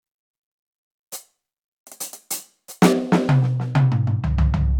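De-emphasis applied wrongly from 2.93 s to the end: a treble-cutting filter meant to reverse pre-emphasis acts on music that never had that boost or had already been de-emphasized, so the response slopes smoothly downward, about 13 dB lower at 10 kHz than at 1 kHz, leaving it dull and muffled.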